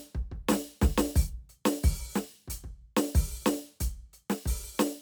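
From 0.87 s to 4.64 s the music carries a regular click about every 1.26 s, four in all, which points to clock drift buffer slips. The likely cause is two clocks differing by a few hundred parts per million, so a small block of samples is periodically dropped or repeated. Each slip appears as a waveform discontinuity and a thin vertical broadband line on a spectrogram.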